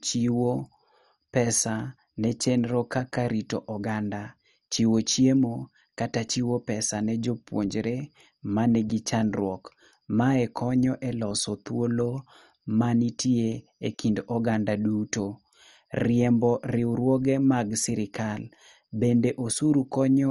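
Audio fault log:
throughout MP2 compression: the speech is dull, with nothing above 11.3 kHz, and a plainly audible gurgling, granular roughness runs through it. The likely cause is MPEG Layer II coding at a rate that fits about 48 kbps. The coder divides the spectrum into 32 sub-bands and shares out a small bit budget, so the highest bands get no bits and go silent while the remaining bands are quantised coarsely, giving the grainy texture.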